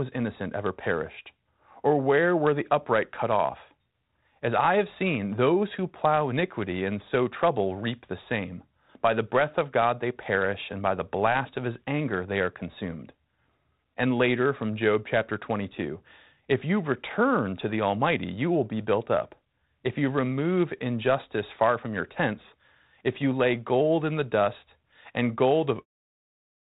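The speech comes through the G.726 ADPCM telephone channel at 32 kbit/s with only light coding texture and nothing above 4 kHz, and the level then eases away in an even fade-out from about 26 s to 25.86 s... 

Correction, as the single sentence: The speech comes through the G.726 ADPCM telephone channel at 32 kbit/s with only light coding texture and nothing above 4 kHz, and the level eases away in an even fade-out that ends at 25.86 s, with no technical fault to report.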